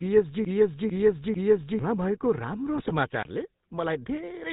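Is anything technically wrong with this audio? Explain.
Yes. GSM full-rate coding runs through the whole clip, which fits the 13 kbps codec. It rebuilds the speech from a vocal-tract model driven by sparse pulses, so nothing above 4 kHz survives and the speech sounds buzzy and gravelly.

GSM bit errors at 2.76 to 2.92 s corrupt the decoder's filter, pitch and gain values for several consecutive frames, so the speech breaks into squawks and gargling.

A block of digital silence at 3.23 to 3.25 s drops the output to silence for 23 ms, which fits a 1024-sample buffer left unfilled. It sounds like a short hole.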